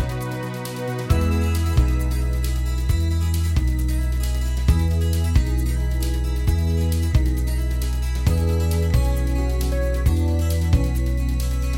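Nothing in the audio stood out as a technical problem on listening.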